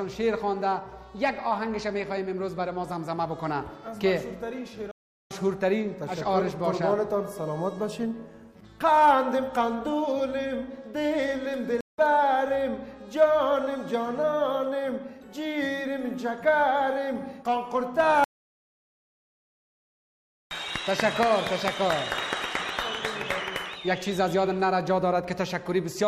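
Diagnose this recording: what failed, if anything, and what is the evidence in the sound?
Stream reconnect at the network stage: silences of 0.39 s at 4.91 s and 0.17 s at 11.81 s, each resuming roughly half a second and 0.15 s later, meaning a fresh decoder joined mid-stream.

Audio dropout to silence from 18.24 to 20.51 s: 2.27 s of silence with no room tone, likely a lost input while the recorder kept writing.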